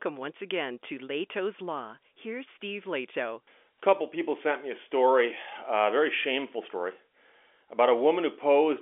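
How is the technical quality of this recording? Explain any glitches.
No glitches can be heard in this speech recording. It comes through as ordinary telephone-band audio, with the G.711 telephone coding at 64 kbps confining it to roughly 300 Hz to 3.5 kHz, and only a faint coding texture at most.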